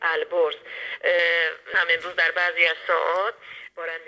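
From 1.19 s to the end, pre-emphasis left on tilts the spectrum upward: the treble boost was never undone, rising about 11 dB toward 10 kHz. Highs sound thin, bright and hissy, and a spectrogram shows brighter upper bands up to the call codec's 8 kHz ceiling.

At 1.74 s a skip ahead drops roughly seven tenths of a second of audio. The waveform joins the two sides directly with no silent gap, and a spectrogram shows an abrupt seam.

From 3.11 to 3.92 s, jitter buffer speed-up runs the audio about 10% fast at unchanged pitch. Around a tenth of a second is removed in tiny pitch-period slices, so the waveform shows no visible gaps, and the passage sounds hurried.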